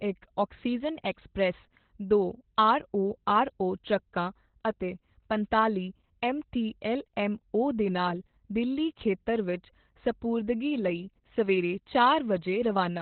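From start to finish the speech sounds muffled, hoarse and faintly robotic, as if heard down an old telephone line, with nothing above about 4.3 kHz. This is Opus voice compression working hard: the narrowband ceiling and the coarse, buzzy texture point to the SILK linear-prediction coder at a very low bitrate, around 8 kbps, where the band is cut to telephone width and the excitation left after prediction is coded only roughly.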